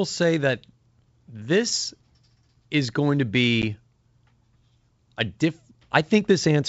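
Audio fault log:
3.62 to 3.64 s, packet loss on an ADPCM call: right after "is going to", about one packet's worth of audio (10 ms) drops to a hard-edged silence. The decoder's adaptive predictor and step size lose track of the G.722 sender at 64 kbit/s, so speech resumes slightly distorted before settling within some tens of milliseconds.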